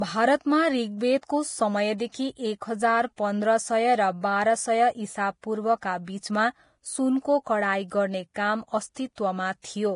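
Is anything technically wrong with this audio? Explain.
Yes. Throughout the speech, treble sounds hissy and grainy, and nothing is heard above 10.5 kHz. This is likely heavy Vorbis compression, consistent with a bitrate around 30 kbps. Coarse treble quantisation turns fine detail into noise.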